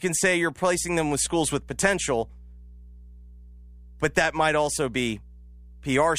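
Speech recording with mains hum coming in at 0.74 s and sitting there right to the end: a steady 60 Hz drone, roughly 20 dB under the speech, most likely from a ground loop or a nearby transformer leaking the power line into the signal chain.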